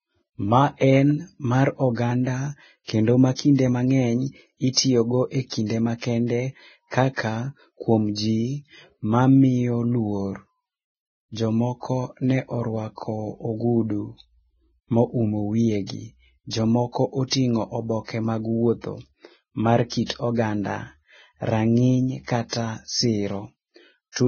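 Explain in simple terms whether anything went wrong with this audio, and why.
Something did go wrong, and it lasts for the whole recording. The speech sounds hissy and grainy, and the crisp edges of consonants are smeared. Nothing can be heard above about 6.5 kHz, so the sound is dull as well as rough. This points to Vorbis compression, likely used at a very low quality setting. To save space, the encoder discarded the top of the spectrum and stored the remaining treble so coarsely that its fine detail turned into noise.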